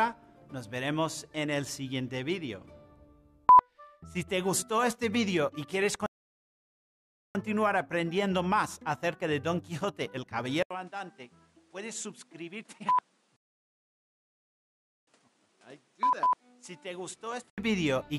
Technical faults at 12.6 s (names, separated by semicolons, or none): input switched to a poorer device